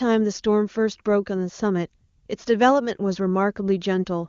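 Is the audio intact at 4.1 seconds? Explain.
Yes, the speech at 4.1 seconds is intact, carried by the AMR wideband (HD Voice) codec at a high rate with at most faint coding traces.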